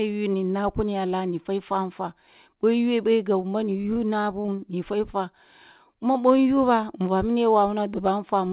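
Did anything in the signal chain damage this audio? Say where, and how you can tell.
Yes, repeated packet loss on the network leg produces choppy, robotic speech from 3.82 to 4.60 s. Six short gaps, none over 25 ms, are patched by extending the preceding sound. Unlike steady band-limiting from the call path's 4 kHz limit, this comes in bursts.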